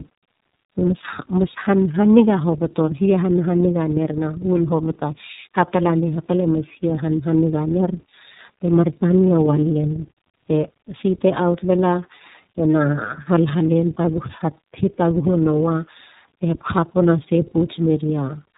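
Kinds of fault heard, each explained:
Tandem speech coding: the speech has passed through two low-rate speech coders one after another, with each re-coding the already damaged output of the first, so their flaws stack. It sounds rougher, more muffled and more warbly than a single codec would, which points to a G.729A-style coder followed by iLBC, with a plain G.711-type link between them. Nothing is heard above about 3.8 kHz, but simple band-limiting would dull the sound without this compounded roughness.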